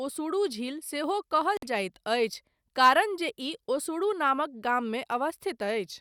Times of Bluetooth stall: 1.57-1.63

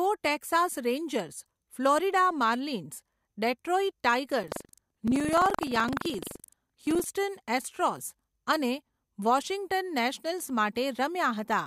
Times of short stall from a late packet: none

